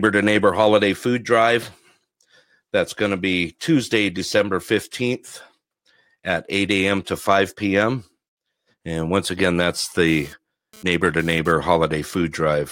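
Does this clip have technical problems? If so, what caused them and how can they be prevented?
Yes. After "once again that's", GSM phone buzz runs from 10.07 to 11.52 s, about 24 dB below the speech. A nearby 2G phone was transferring data, and the audio circuit rectified its radio bursts, giving a raspy 217 Hz buzz. Keep phones away from the recording equipment, or switch them off.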